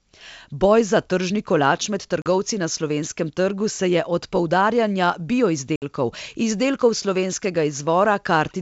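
At 2.22 s, between "za tržni kolač med" and "na slovenskem trgu se", there is packet loss on an ADPCM call. About 40 ms of speech drops to abrupt silence, roughly two packets. At 5.76 s a longer gap of about 60 ms follows, around three packets. Each hole has hard edges. Afterward the decoder's predictor and step size no longer match the sender's. So the speech comes back slightly distorted, before settling over the following tens of milliseconds.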